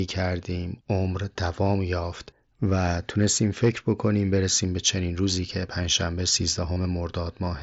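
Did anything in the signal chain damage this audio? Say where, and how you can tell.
Yes, at the Bluetooth link, right near the end. Around 6.73 to 6.76 s there's concealed Bluetooth headset packet loss: about 30 ms where the receiver filled the gap by repeating the best-matching recent waveform. That fits roughly four lost frames, heard as a brief buzzy hold, over the light graininess of the mSBC wideband codec.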